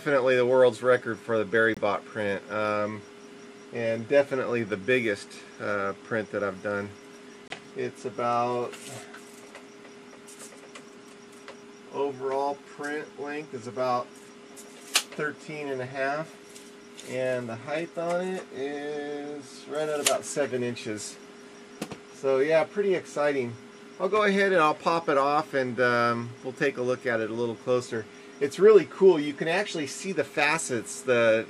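At 1.74 s the audio drops into sudden silence for about 42 ms, and at 7.47 s it does so again for about 48 ms, which points to one damaged frame and then a run of two. This is a corrupt frame muted: the decoder rejected frames with flipped bits and the player filled them with silence. Unlike a dropout that shifts or smears the audio, the gaps start abruptly and timing is preserved, so the sound resumes exactly on schedule.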